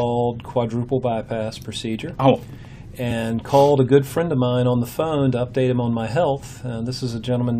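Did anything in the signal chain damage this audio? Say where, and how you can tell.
Yes. At 3.10 s there is a brief blip, over in a few hundredths of a second, which points to damaged data in a compressed stream at the codec or storage stage. Some bytes of the encoded file were lost or corrupted, so the decoder misread those frames and had to resynchronise on the next valid header. It differs from an analogue click or a network dropout because it comes from the decoder losing frame sync inside the encoded data.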